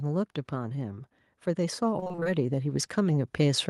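From about 0.49 s right through to the end, there's automatic gain rising. The gain control decided the input was too quiet and kept pushing its level up, so the speech and the background noise swell together gradually rather than jumping.

Between roughly 1.99 and 2.27 s you get repeated packet loss, which gives that robotic sound. Short holes arrive one after another, none longer than about 23 ms, and roughly half the stretch is patched by stretching the previous sound, leaving it choppy.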